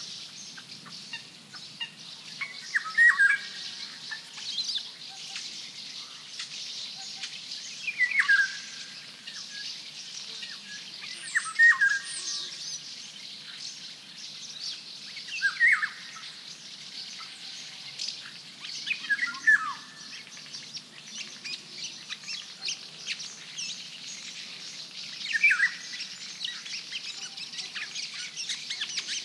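No audible technical faults.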